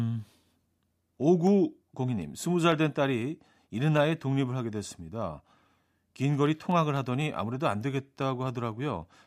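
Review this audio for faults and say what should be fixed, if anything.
You've got periodic USB or driver dropouts: a regular tick every 0.25 s from 0.22 s to 9.21 s, around forty in all. Each time, something stalls the USB bus or audio driver and a sliver of speech well under a millisecond gets skipped outright. Fix it by tracking down the background task hitting the bus on that schedule, or give the interface its own USB port and raise the driver buffer.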